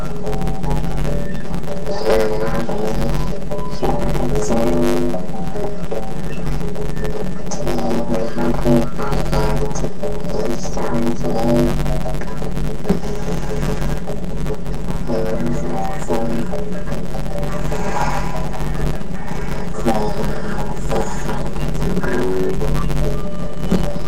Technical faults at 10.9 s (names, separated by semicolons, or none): planar audio read as interleaved